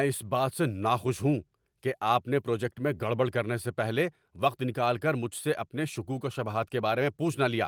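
No technical faults can be heard anywhere in the recording.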